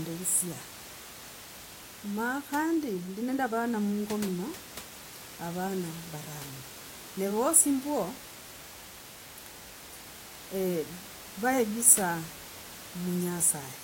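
Nothing goes wrong anywhere in this speech recording, and the only thing under the talking is a bit of room noise sitting about 17 dB below it, which is just part of the space the microphone was in.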